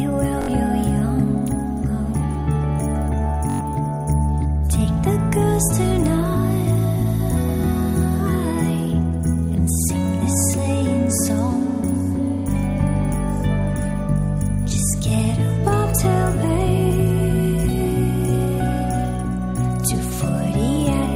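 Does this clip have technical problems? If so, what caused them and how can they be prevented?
Yes. Two bursts of Bluetooth stutter: a brief buzzy, machine-gun repeat from 0.42 to 0.48 s, and a longer one from 3.50 to 3.61 s. Both times the wireless link lost or delayed audio packets, so the receiver kept replaying its last short buffer. About 64 ms of sound went missing in the first gap and about 107 ms in the second, which fits a handful of dropped packets. The audio then resumes further on, as though it had kept playing. Keeping the devices close with a clear line of sight, away from crowded 2.4 GHz Wi-Fi, or using a wired connection, would prevent it.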